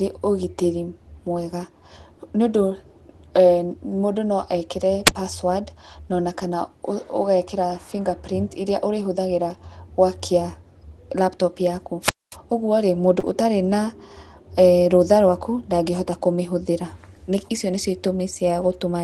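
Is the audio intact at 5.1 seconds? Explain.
No. At 5.06 to 5.11 s there is a wireless microphone squelch dropout. The analogue FM radio link from the microphone faded, and the receiver's squelch muted its output to avoid passing static. In the speech, this sounds like a short burst of rising hiss, then a hole of near silence lasting about 30 ms, then the voice returning.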